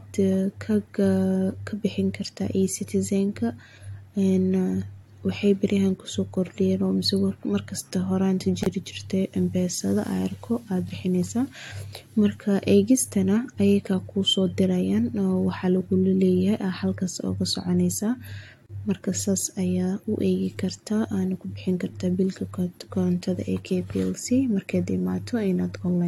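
Gaps at a join of encoded pieces occur at 8.63–8.66 s and again at 18.66–18.69 s, about 10 seconds apart, lasting 29 ms and 31 ms. The speech was encoded in separate sections and joined without trimming, so each section's leading encoder delay and padded final frame remain as a brief silence. The speech cuts out with a smeared edge, then resumes exactly where it stopped.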